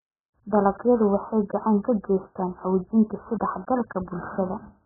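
From start to finish the speech sounds muffled and underwater. Nothing comes through above about 1.8 kHz, so the consonants lose their edge and sibilants barely register. The damage is heavy, with a smeared, warbling texture over sustained sounds. That all points to AAC compression, likely AAC-LC at a very low bitrate of around 8 kbps. At that rate the encoder drops the cut-off right down and quantises what's left so coarsely that the detail breaks up.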